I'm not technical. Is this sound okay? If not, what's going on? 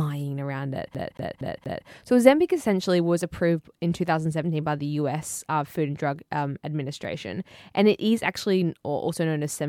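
No. Right after "around it", from 0.94 to 1.88 s, the speech jumps back and replays the same 0.23 s slice four times, with a tiny silent gap at each jump. That fast, even stutter is a CD stuck on one turn: the player keeps skipping back to one spot.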